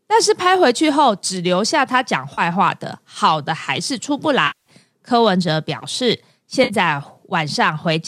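AAC frame loss with concealment at 2.34, 4.47 and 6.64 s: decoder frames went missing, likely in the low-delay AAC stream, and were patched from the last good spectrum. Gaps of 40, 190 and 60 ms, fitting 10 ms frames, sound like a smeared, noisy or phasey patch.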